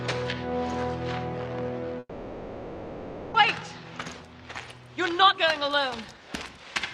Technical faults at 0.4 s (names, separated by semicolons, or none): none